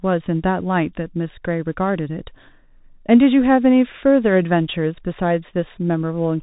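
From start to finish the speech carries Bluetooth CVSD headset codec damage: one-bit slope coding, which fits a 64 kbps link, leaves scratchy s sounds and a granular hiss. A spectrogram shows nothing above 3.8 kHz, and the waveform looks grainy and stepped.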